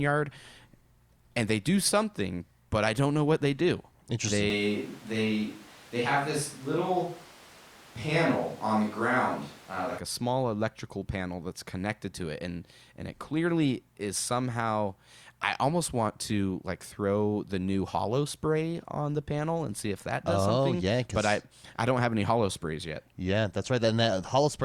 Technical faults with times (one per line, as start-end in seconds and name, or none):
4.50-9.98 switch to a distant microphone